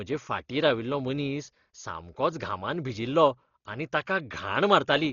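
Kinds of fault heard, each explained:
Dolby Digital compression: likely a starved AC-3 encode, fitting about 32 kbps, leaving speech dull, with nothing above 6.9 kHz and heavy rough, fluttering fill noise.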